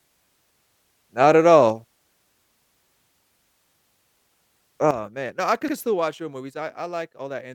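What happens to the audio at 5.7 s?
At 5.68 to 5.74 s there are repeated frames. A 64 ms block plays a second time, causing an audible stutter and lengthening the audio by 64 ms. This moment also falls within a sudden gain jump that began at 4.91 s. The sound and background dropped together by about 12 dB, likely from a gain change applied without a ramp.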